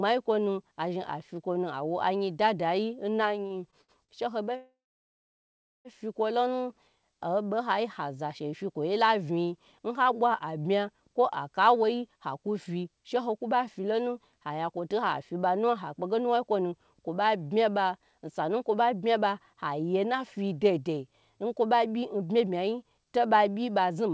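From 3.47 to 4.12 s there are repeated stalls (stutter): four times the jitter buffer ran dry and the receiver stretched the last sound, the longest fill lasting 69 ms and fills making up about a quarter of the span. It drags and hiccups. On a spectrogram, brief smeared, repeated frames interrupt the flow.

Between 4.57 and 5.88 s the audio halts for 1.28 s, with about 1.1 s of it dead silent, before resuming where it stopped. This is a call audio freeze, likely from packets held up in transit. The waveform shows a short fading tail, then a flat line.

From 11.67 s to 24.09 s a jitter buffer speed-up runs the audio at 108% speed, trimming about a second in total through many tiny pitch-period cuts. The pitch stays put but delivery sounds rushed. A spectrogram shows events packed closer together, with harmonics unchanged. Throughout, nothing reaches above 8 kHz, which fits a G.722 wideband call codec.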